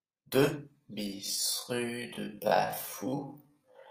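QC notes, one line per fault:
1.0–3.9 s, time-stretched section: the speech abruptly drops to roughly half pace, running at 0.54 times its original speed through to the end, yet the pitch stays unchanged. The slowed stretch drags, with syllables dragged out. This is likely software lengthening the segment to fill a set duration, holding pitch by repeating short slices of the audio.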